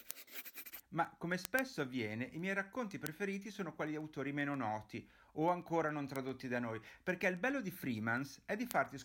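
A receiver reads the digital link on its own unlocked clock, drifting by something like 150 ppm. Each slip drops or repeats one sample, giving word clock ticks through the speech from 0.11 s to 8.98 s: short clicks roughly every 0.15 s, around seventy of them.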